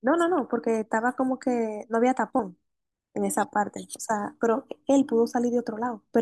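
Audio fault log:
2.40 s, dropped buffer (overrun): an abrupt forward jump in the speech, likely from roughly 15 ms of samples overwritten before being read.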